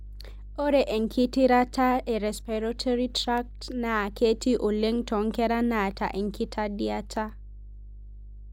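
A speech recording carries mains hum from start to finish, a steady 50 Hz drone sitting fairly high, roughly 15 dB below the speech, so it is plainly audible in every pause. A ground loop or a nearby transformer has let the power line leak into the signal path. On a spectrogram it shows as an unbroken horizontal line at 50 Hz with fainter lines at low harmonics above it, and the waveform shows a regular low ripple riding under the speech and filling the gaps.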